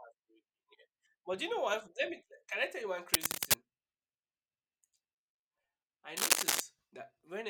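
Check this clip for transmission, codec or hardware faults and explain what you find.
The speech carries two bursts of cable scratch noise, from 3.14 to 3.54 s just after "I tell you one" and from 6.17 to 6.60 s. Each is dense, uneven crackle, roughly 10 dB above the speech, likely from a worn cable or connector whose contact resistance fluctuated as it moved.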